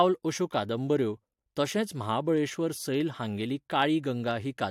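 No technical faults are audible.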